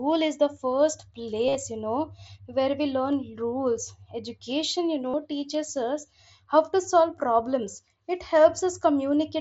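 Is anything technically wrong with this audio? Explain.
Yes. There is concealed Bluetooth headset packet loss, twice. From 1.47 to 1.55 s, about 60 ms of audio went missing across a 75 ms stretch. The longest gap was 37.5 ms. At 5.10 to 5.14 s, another 30 ms dropped out. Packets between headset and phone were lost. The receiver filled each gap by repeating the best-matching recent stretch of the waveform. The longer gaps come out as a short buzzy tone at full level, with a slight warble as real speech resumes. The wideband mSBC link itself adds only light grain.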